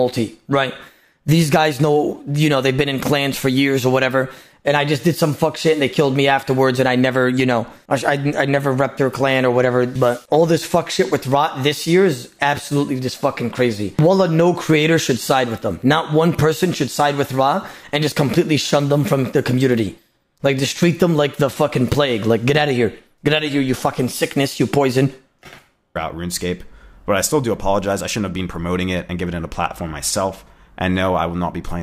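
No technical faults occur anywhere in the audio.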